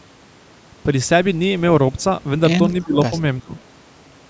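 At the far end, an echo canceller likely failed to remove all of its loudspeaker pickup, so an echo leak is sent back. From 2.81 to 2.86 s a very faint copy of the speech, roughly 35 dB below it and delayed by 354 ms, surfaces as a brief ghostly scrap trailing the talker. Its short length and low level make it sound like a residue rather than a clear repeat.

Immediately after, from 2.84 to 3.12 s, comes speech suppressed in double talk. This is likely the canceller mistaking the talker for echo while both sides overlap, and turning everything down. For about 150 ms in total the speech dips by as much as roughly 20 dB, sounding pulled back. A second, shallower dip of roughly 15 dB follows at 3.41 to 3.51 s.

The same faint echo leak, again 354 ms late, returns at 3.56 to 3.61 s.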